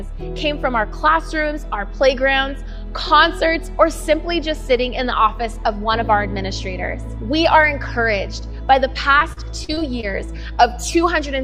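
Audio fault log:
9.19–10.05 s repeated packet loss (robotic sound): six gaps up to 41 ms bridged by repeating prior sound, giving choppy robotic tone; spectrogram shows stuttering, smeared frame blocks.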